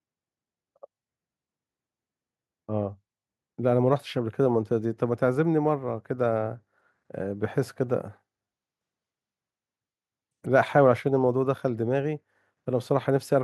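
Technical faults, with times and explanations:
Nothing stood out on listening to this speech recording.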